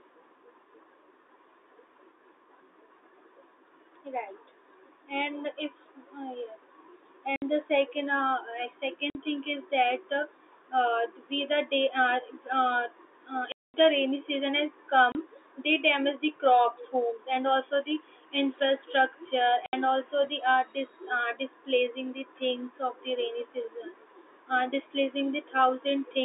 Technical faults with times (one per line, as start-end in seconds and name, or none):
7.36-7.42 packet loss filled with silence
9.10-9.15 packet loss filled with silence
13.52-13.74 packet loss filled with silence
15.12-15.15 packet loss filled with silence
19.66-19.73 packet loss filled with silence